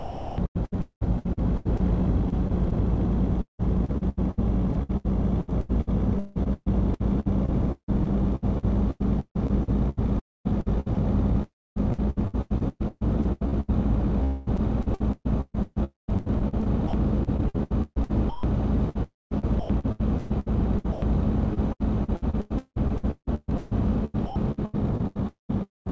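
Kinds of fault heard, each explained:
Sound chopped by the voice detector: The sound turns choppy, with pieces giving way to a smooth synthetic hiss. This runs through the whole clip, with about 7.2 s replaced in total, and also shows from 15.84 to 16.93 s, 18.29 to 19.69 s and 25.27 to 25.88 s. The likely cause is the sender's voice detector repeatedly toggling transmission off and on, with comfort noise filling each gap.
Long network dropout: At 14.24 s the sound briefly smears into a fading buzz or hiss, then resumes at 14.49 s with about 0.22 s of the original missing, so the continuation jumps slightly forward. No true silence appears, because the receiver stretched the last received audio across the hole. The likely cause is a run of packets that never arrived, leaving the receiver's concealment to bridge the gap.
Sound dropped by the voice detector: At 20.92 s and again at 24.26 s, about 0.1 s of sound vanishes and a steady, even noise takes its place before the original returns. 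Nothing is smeared or stretched. A flat noise floor simply replaces the lost material. The likely cause is the sender's detector mistaking that quiet stretch for background and pausing transmission, so the receiver played comfort noise until sending resumed.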